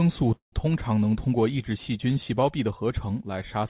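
At 0.34 s the speech stalls for about 200 ms, until roughly 0.54 s. That's a call audio freeze, likely from packets held up on the way so the jitter buffer ran dry. The receiver stretches the last bit of sound into a short fading buzz, and most of the stall, about 120 ms, is just silence. When things resume, the speech picks up right where it left off. Nothing's lost, but everything after lands about 182 ms later. The narrowband sound, with nothing above 4 kHz, points to G.711 on the call path.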